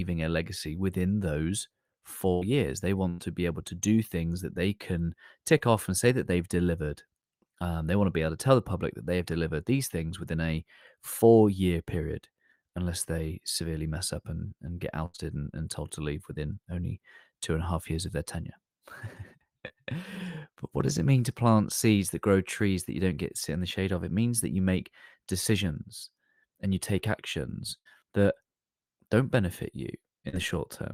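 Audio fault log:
2.33–2.43 s, 3.09–3.20 s, 15.06–15.16 s, 27.78–27.87 s: burst of packet loss. Each time about 80 ms of the stream arrives too late or not at all, and the receiver stretches the last received sound across the hole while fading it down. The result is a held buzz or a thinning hiss of roughly 75 to 90 ms, after which speech picks up further along with that stretch gone. The third falls between "up and and get" and "and and told to", and the fourth comes right after "and you take actions".
5.58–5.62 s, 19.68–19.72 s, 30.29–30.35 s: short concealed packet loss. Here the decoder misses only about 20 ms, or about 40 ms in the last case just after "don't benefit you". It patches the gap by extending the preceding sound, pitched or noise-like, and cross-fades back into the real signal. Each patch is heard as a quick smear or wobble rather than a clear dropout.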